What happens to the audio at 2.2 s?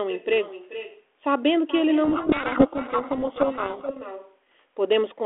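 At 2.2 s the decoder is reading the G.726 code words with their bit order reversed, a codec payload misread lasting from 2.04 to 3.97 s. Every 4-bit difference value is misinterpreted, so the adaptive prediction goes wrong, and the speech is buried under harsh, grinding distortion until the packing matches again. An echo with no canceller is also present. The far end's loudspeaker feeds back into its microphone, so a copy roughly 0.4 s late and about 14 dB quieter trails the sound, thin.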